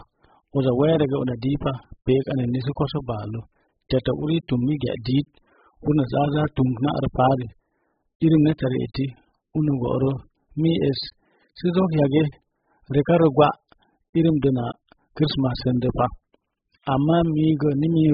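From start to end, the speech has heavy AAC compression damage. Nothing is present above about 5.1 kHz, so the sound is dull and boxed in. Sibilants lose their edge and turn fizzy. Sustained sounds warble and smear. The coder has too few bits for each frame. It drops the top of the spectrum and leaves gaps in the rest. This is likely AAC-LC at a very low bitrate, which fits a rate near 8 kbps.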